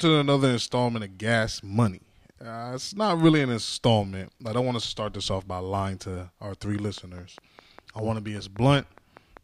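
Likely interference from nearby equipment or a faulty connection or power supply is injecting a train of clicks into this speech clip from 6.98 to 9.38 s, just after "lying to our three": some fifteen evenly spaced pulses at 5 per second, ticking about as loud as the speech itself.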